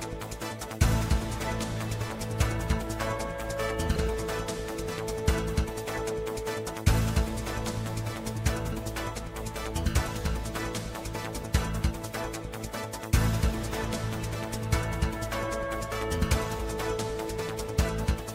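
At 3.95 s and 16.58 s, damaged data in the compressed stream causes brief blips. The decoder misreads corrupted frames, loses sync, then locks onto the next header.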